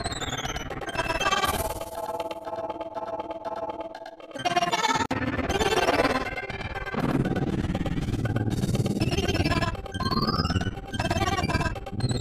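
At 5.06 s a gap at a join of encoded pieces cuts the sound for about 51 ms, ending at 5.11 s, then it resumes where it stopped. Encoder start delay and end padding left between separately coded pieces form this silence, which shows as a blank vertical band with smeared edges.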